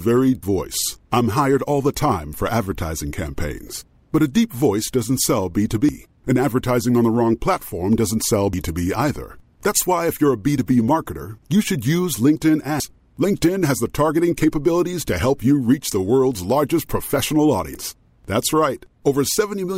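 At 0.43 s the speech jumps ahead, losing about a third of a second. Similar jumps follow at 5.89, 8.53, 12.8 and 17.75 s. The later losses are shorter except at 12.8 s. Each is likely a dropped buffer (overrun), with audio overwritten before capture.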